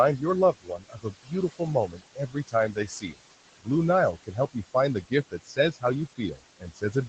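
Throughout the clip, noise suppressor artifacts come from the suppressor pulling steady room noise down by about 21 dB, so the background pumps between phrases. At 0.52–1.61 s, 1.87–3.31 s, 4.14–4.75 s, 5.3–5.84 s, 6.08–6.41 s and 6.58–6.95 s, the speech is cut by the noise suppressor, which mistakes speech for noise and dips it by about 19–21 dB. Soft consonants and word endings sound swallowed, most of all in the first two stretches, and the room noise under them drops away.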